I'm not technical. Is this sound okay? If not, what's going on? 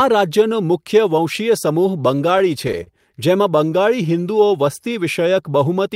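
No, not quite. Between 2.30 and 2.89 s there are repeated stalls (stutter): the speech hiccups five times as late-arriving data runs the playback dry, and the gaps are covered by stretching the last sound, about 68 ms in all, longest 34 ms. Nothing's actually lost, it just trips.

Then from 3.55 to 4.48 s there's a jitter buffer slow-down. The system was low on reserve, so it quietly repeated tiny slices of speech, adding about 69 ms. The speech plays at roughly 94% speed, a bit drawn out, with the pitch unchanged.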